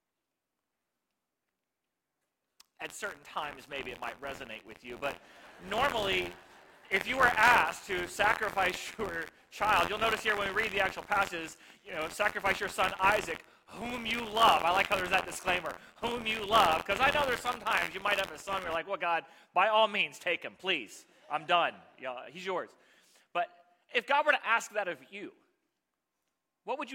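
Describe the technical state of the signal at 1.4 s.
At 1.4 s the audio is inside a stretch of buffer tearing running from 0.0 to 18.75 s. The writer and hardware reader have slipped, so each buffer splices in a small slice of audio about 50 ms old between two hard joins. That produces a steady 86.1 Hz robotic rattle, which fits a 512-sample buffer. Unlike dropouts, there are no silent gaps, and the rattle sounds only while signal is present.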